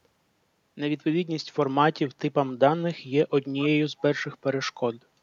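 From 3.58 to 3.69 s a faint echo leak appears: a brief delayed copy of the speech, about 440 ms late and roughly 20 dB below it. The likely cause is a far-end loudspeaker whose echo canceller failed to remove its microphone pickup.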